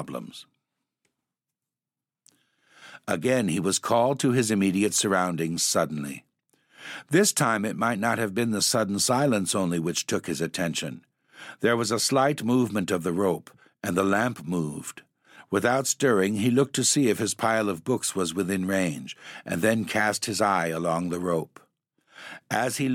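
No technical faults can be heard anywhere in the recording; the signal stays continuous throughout the speech.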